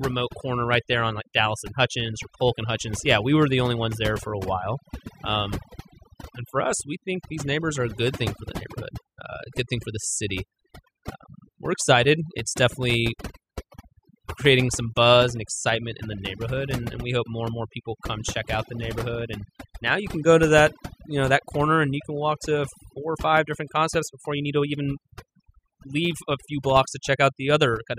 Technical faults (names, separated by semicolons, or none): overdone noise removal